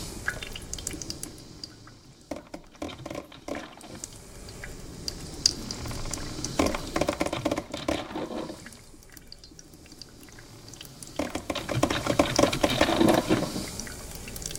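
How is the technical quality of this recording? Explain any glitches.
The recording has zipper noise in three places: from 0.94 to 2.03 s as the level drops by roughly 15 dB, from 7.00 to 7.53 s during a drop of about 10 dB, and from 10.97 to 12.31 s as it rises about 10 dB. Each level change moves in unsmoothed steps, around 50 per second, and each jump leaves a tiny click, heard as a ticking buzz. The waveform envelope looks like a staircase, and the spectrogram shows evenly spaced vertical lines.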